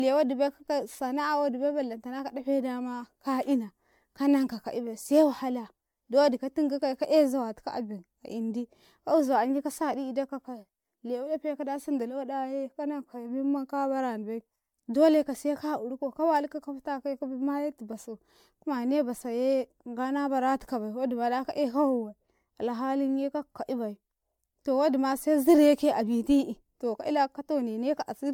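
Throughout the speech, the audio was likely decoded and re-encoded around ten times with MP3, which fits a 128 kbit/s encoding. That generation loss stacks quantisation noise and spectral holes, giving a swirly, hollow, smeared sound with blurred attacks and nothing above 19.9 kHz.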